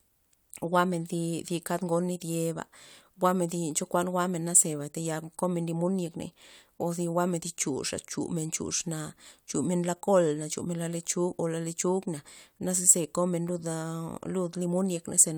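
No technical faults are audible anywhere in the recording.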